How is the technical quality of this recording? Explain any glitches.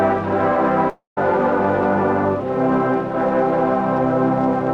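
The recording has one clear glitch, a long network dropout from 0.89 s to 1.19 s. The sound is consistent with a stream that stopped delivering data, which is the likely cause. About 0.28 s of material goes missing. The receiver's concealment extends the last sound as a buzz or hiss that fades out, leaving about 0.14 s of silence. The audio then resumes further on, with the lost stretch skipped rather than delayed.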